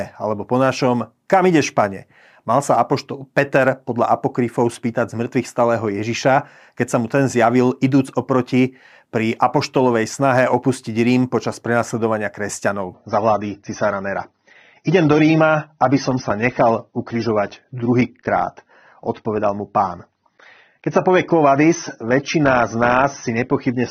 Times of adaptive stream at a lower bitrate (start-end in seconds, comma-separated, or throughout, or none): 12.94-23.90